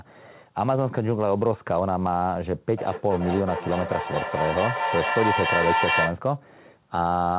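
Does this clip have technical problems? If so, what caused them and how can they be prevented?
Yes. From 2.77 to 6.22 s there is feedback echo between two devices: the speech returns roughly every 0.4 s, building up to about the level of the original instead of fading like a single echo. Mute all but one device in the room, or have everyone there wear headphones.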